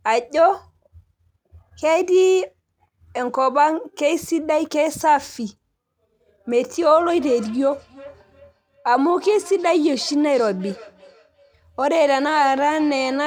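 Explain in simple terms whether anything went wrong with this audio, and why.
From 6.96 s to the end, feedback echo between two devices: speech returns about every 0.4 s, thinner and more ringing, unlike room reverberation's smooth fade.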